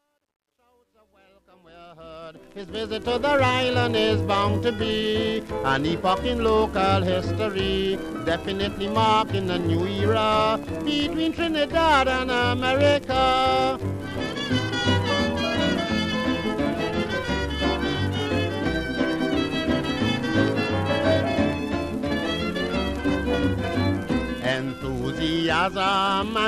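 From the start to 3.19 s, the fade-in shows truncation distortion: the gain stage kept about 11 bits without dither, so the quietest levels collapse into square steps, sounding gritty, worst until 1.81 s, unlike smooth hiss from proper dither.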